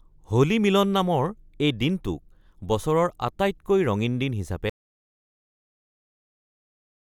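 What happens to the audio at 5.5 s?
At 5.5 s you're inside an audio dropout to silence: from 4.70 s to the end the speech cuts to silence with no room tone left, likely a lost input while recording continued.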